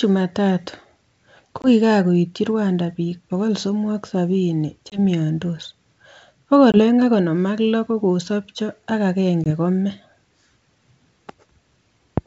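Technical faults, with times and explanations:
1.62–1.67 s, 4.90–4.99 s, 6.72–6.79 s and 9.44–9.47 s: packet loss on an ADPCM call. Each time, about one packet's worth of audio (20 ms) vanishes and is replaced by silence, cutting a hard-edged gap into the speech. The decoder's adaptive predictor and step size no longer match the sender's, so the sound comes back with slight distortion until they realign. The surrounding G.722 wideband audio stays clear up to 7 kHz.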